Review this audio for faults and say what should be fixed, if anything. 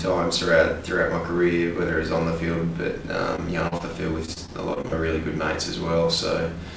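Short concealed packet loss occurs three times: 3.36–3.39 s, 3.68–3.73 s and 3.77–3.81 s, with roughly 20, 40 and 20 ms of audio missing. Each time the decoder got nothing in time and patched the hole by extending the preceding sound before blending back, so you hear a brief smear or wobble rather than the clean silence of a dropout. To prevent it, give the jitter buffer more headroom or add forward error correction.

Repeated packet loss (robotic sound) runs from 4.25 to 4.94 s. Six gaps, the longest about 42 ms, leave roughly a fifth of that stretch concealed. Because each patch is followed closely by the next, the extensions chain into a choppy texture with pieces missing. Ordinary codec coding noise is steady and never chops like this. The band limit at 8 kHz throughout fits a wideband codec such as G.722 and is not part of this fault. To prevent it, fix the network path's sustained loss and enable redundancy or FEC.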